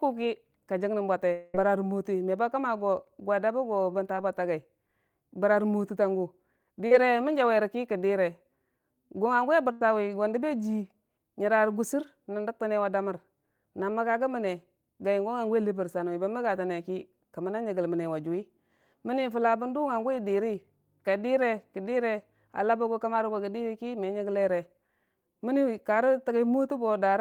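This speech clip has three kinds of network trouble in the first ten seconds. At 1.32 to 1.55 s there's what sounds like a long network dropout, likely a stall in delivery. About 210 ms of audio never arrives, and the receiver papers over the whole hole by stretching the last sound into a fading buzz or hiss rather than dropping to silence. When the speech comes back it has jumped ahead, so that stretch is simply gone. There are also two short concealed packet losses, one at 4.16 to 4.18 s and one at 6.87 to 6.92 s. The first is only about 10 ms missing and comes across as a tiny smear. The second is about 40 ms and gives a longer smear or wobble. In both the decoder carries the previous sound forward, from its pitch if it was voiced or as shaped noise if not, then crossfades back into the real signal, and a quick consonant can get swallowed there. The last one is a burst of packet loss at 9.72 to 9.81 s. 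Roughly 90 ms of consecutive audio is missing. The receiver holds the last sound and turns it down as the gap goes on, so you hear a brief held buzz or fading hiss before the speech resumes a little further along, without the piece in between.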